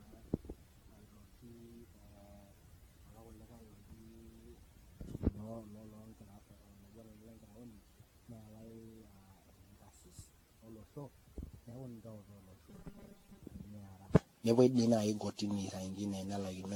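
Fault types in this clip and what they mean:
Generation loss: The speech sounds swirly, smeared and hollow throughout, more so than one lossy encode at a moderate rate would leave. Consonant attacks blur. Nothing is present above 18.6 kHz. This points to AAC-style coding near 96 kbit/s, likely applied again and again, perhaps around fifteen times. Each new pass quantises on a shifted frame grid, so the noise and spectral holes keep piling up.
Robotic sound from repeated short buffers: From 12.69 to 13.40 s the speech becomes a rigid, metallic buzz at 200 Hz. It still roughly follows the speech's rhythm. The likely cause is audio arriving too seldom. Playback then fills the gaps by looping the last short chunk, which fits a buffer of about 5 ms. Most of the real audio in that stretch seems skipped and replaced by the repeats.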